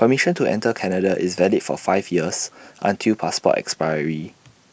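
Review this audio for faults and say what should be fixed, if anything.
Nothing should be fixed, as the review finds no faults in the audio.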